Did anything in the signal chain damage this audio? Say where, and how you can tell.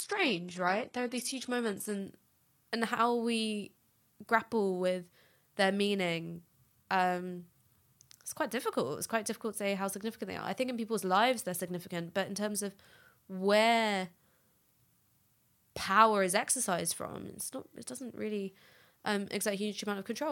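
Yes, an adaptive stream starting at a low bitrate: the first 2.0 s of speech sound thin and smeary, like low-rate HE-AAC, then jump cleaner with no gap as the player steps up.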